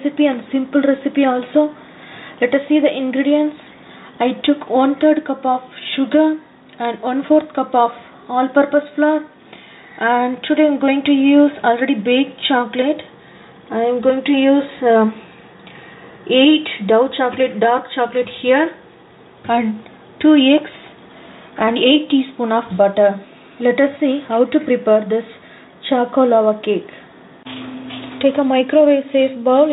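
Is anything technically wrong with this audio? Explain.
No, nothing is technically wrong with this audio; it has come through a call path whose narrowband coding leaves nothing above 4 kHz.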